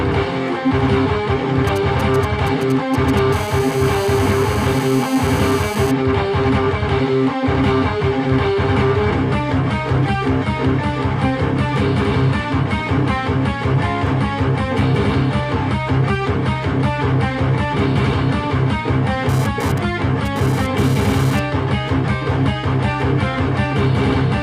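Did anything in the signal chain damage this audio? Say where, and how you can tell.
Yes. In the analogue wiring, a nearby 2G handset is sending short groups of GSM signalling bursts, and the audio circuit rectifies the radio pulses into audio. From 1.67 to 3.19 s this is heard as a galloping dit-dit-dit of brief raspy buzzes at about 217 Hz, sitting roughly 15 dB below the programme. The pulse rate, not the content of the audio, sets the pitch, which marks it as RF pickup.

The same analogue stage picks up GSM phone buzz once the handset transmits continuously. From 3.33 to 5.91 s a steady, hard 217 Hz buzz rich in harmonics runs at about 14 dB below the signal, consistent with an active call. From 19.29 to 21.40 s it returns at about 14 dB below, but stutters on and off, the irregular gating of a data transfer. Its fixed pitch and unrelated timing show the buzz is demodulated interference.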